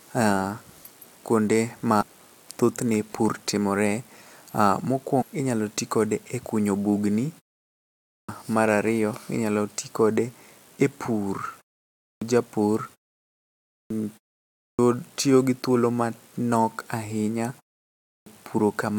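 In this speech clip, the compressed stream carries damaged data in two places, so the decoder misreads the affected frames, loses sync and has to hunt for the next valid frame header. Each event comes out as a short glitch about 22 ms long: at 2.00 to 2.03 s, between "kuonde ma" and "thothne pur timore", and at 5.20 to 5.23 s, just before "inyalo tikode". The output device also dozes off during silences and needs time to wake and lock again, which causes a clipped start after a pause at five points where the talking resumes. Between a quarter and a third of a second is swallowed each time, so the speech bursts in abruptly without its opening sounds. This happens at 8.00 to 8.29 s (about 0.29 s lost after a 0.67 s pause, right before "mar ariyo inyalo ti"), 11.97 to 12.22 s (0.25 s lost after 0.43 s), 13.62 to 13.90 s (0.29 s after 0.74 s), 14.52 to 14.79 s (0.27 s after 0.41 s) and 17.98 to 18.26 s (0.29 s after 0.45 s).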